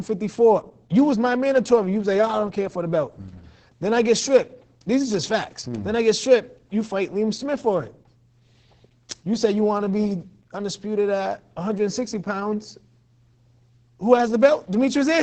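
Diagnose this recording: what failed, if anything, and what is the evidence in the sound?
Codec stage: Opus voice compression throughout, with nothing above 9 kHz and muffled, hoarse, robotic speech, which points to SILK coding at around 10 kbps with coarse excitation.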